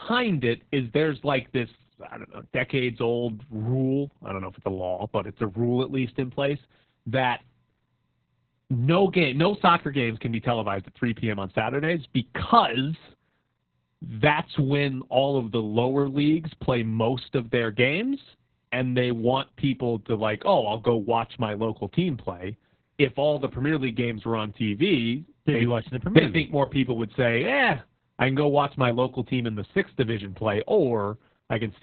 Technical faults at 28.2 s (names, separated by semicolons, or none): Opus voice compression